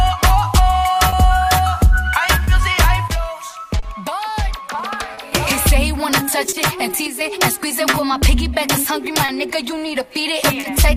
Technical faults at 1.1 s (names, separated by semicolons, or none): clock drift between sender and receiver; short stall from a late packet